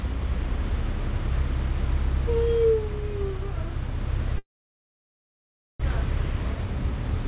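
From 4.38 to 5.86 s, the sound fades into a brief buzz and then about 1.3 s of silence, likely a long network dropout. When it resumes, roughly a second of material is gone, unlike a short concealed gap. From 5.94 to 7.24 s, a jitter buffer speed-up trims about 70 ms, running the everyday sounds 5% faster. Unlike resampling, the pitch stays the same throughout this G.711 call path, whose audio stops at 4 kHz.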